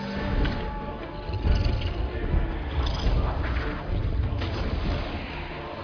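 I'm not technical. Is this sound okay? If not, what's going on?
Yes, this sound is okay. There's nothing wrong to point out.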